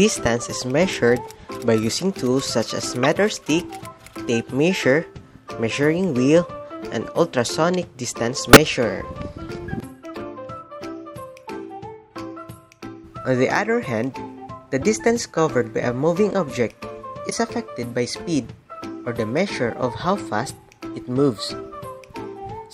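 Corrupt frames get decoded at 3.03–3.06, 7.45, 8.53–8.57, 14.81 and 17.30–17.33 s. Garbled codes throw energy to the wrong frequencies, giving short chirpy bursts, loudest near full scale at 8.53.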